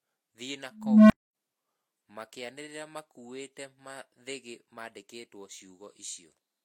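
Speech runs through the whole clip with two layers of compression smearing on top of each other: swirly, metallic high-frequency texture alongside a dull, band-limited top end. This is the sign of transcoding between lossy codecs, likely a first encode resembling Vorbis at around 49 kbit/s re-encoded as HE-AAC at around 40 kbit/s. A single low-bitrate encode would show one consistent artefact character, but here the second codec spends its bits re-coding the first one's errors, and the lower cut-off survives. From 0.71 s to 1.35 s an unstable filter takes over: a low tone around 200 Hz swells over roughly 390 ms until it clips, then the output drops to silence for about 250 ms while the filter resets. Acoustic feedback also builds into a howl, but it keeps ringing or fades. It does not end in an abrupt numerical dropout like this.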